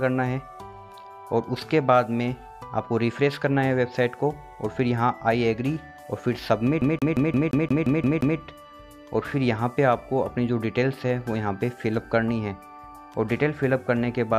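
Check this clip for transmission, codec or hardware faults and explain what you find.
One playback fault. From 6.81 to 8.39 s, the CD is stuck on one turn. A scratch throws the laser back, so a 175 ms slice repeats nine times in a fast, even stutter.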